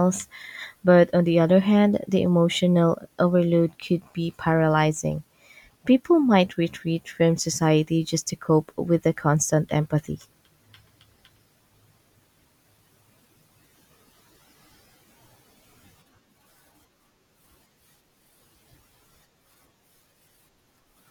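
Nothing in the speech here stands out as a technical problem; the audio just carries on steadily with nothing to flag along the way.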